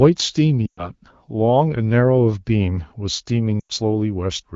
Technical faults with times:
0.66-0.90 lost AMR speech frames
3.60-3.72 lost AMR speech frames

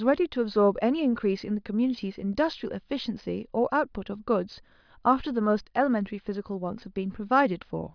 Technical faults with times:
none

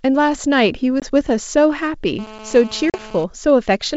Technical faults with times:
1.00-1.11 packet loss on an ADPCM call
2.19-3.24 GSM phone buzz
2.90-2.97 packet loss on an ADPCM call

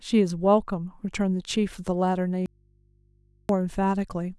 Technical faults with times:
2.46-3.49 audio dropout to a faint residue

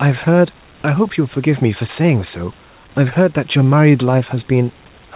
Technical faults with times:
none

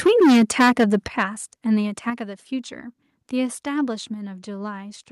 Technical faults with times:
0.06-1.23 microphone overload
0.07 microphone volume stepped down
1.08 microphone volume stepped down
2.10 microphone volume stepped down

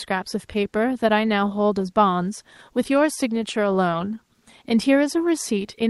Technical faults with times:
none

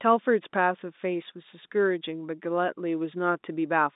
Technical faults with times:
none

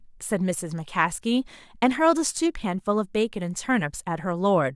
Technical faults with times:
none

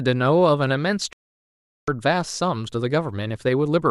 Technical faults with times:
1.13-1.88 digital broadcast dropout

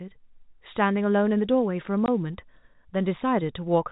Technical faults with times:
2.06-2.08 packet loss filled with silence

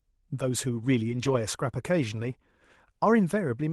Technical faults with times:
1.09-1.35 lost packet rebuilt from error correction

